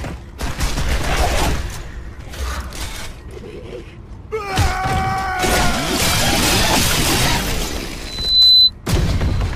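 A microphone picked up the loudspeaker it was feeding, and at 4 kHz the loop gain rose above one, producing loudspeaker feedback squeal from 8.05 to 8.71 s. A piercing 4 kHz tone swells over a little under half a second to about 10 dB above the sound.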